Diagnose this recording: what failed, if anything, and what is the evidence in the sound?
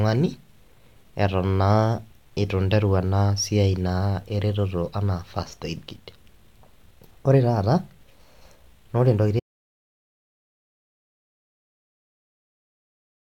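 An audio dropout to silence cuts the speech off at 9.40 s and lasts to the end. The gap is silent with no room tone: a flat waveform line and a blank spectrogram. The input was likely lost at capture while the recorder kept writing silence.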